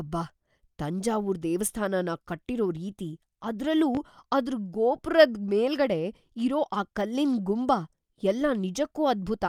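A loud pop at 3.95 to 3.98 s in this speech recording, a single sharp thump a few decibels above the voice, is likely a voltage spike from a plug, switch or static discharge, with the speech continuing underneath.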